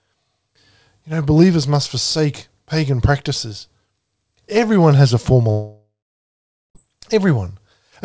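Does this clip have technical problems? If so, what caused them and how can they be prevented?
Yes. From 5.51 to 6.77 s, right after "has a former", the sound smears into a fading buzz, then about 0.8 s of silence before resuming with audio missing: likely a long network dropout. Preventing it means using a more stable connection, such as wired rather than congested Wi-Fi, or adding redundancy and forward error correction to the stream.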